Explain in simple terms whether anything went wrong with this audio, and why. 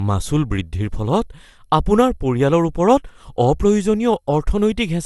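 Throughout the speech there is a swirly, hollow smear, consonants sound blunted, and nothing is left above about 11.9 kHz. This points to generation loss: the audio was likely compressed and re-compressed several times, around four passes, piling up damage that a single compression wouldn't cause.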